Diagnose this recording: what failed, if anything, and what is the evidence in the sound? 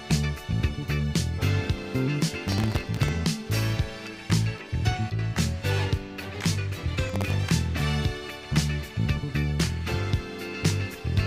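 Processor overload crackle at the driver or buffer stage: gritty tearing from 2.48 to 3.16 s and from 7.09 to 7.33 s. Sub-millisecond buffers repeatedly missed deadlines and replayed stale audio, leaving hard-edged waveform steps and dense broadband vertical streaks on a spectrogram.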